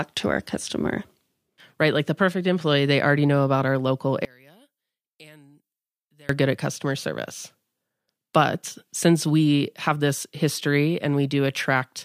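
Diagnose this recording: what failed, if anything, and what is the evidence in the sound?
One channel inverted, 4.25 to 6.29 s after "know about our local": speech falls about 31 dB as centred sound cancels in mono, likely from reversed polarity in the analogue wiring.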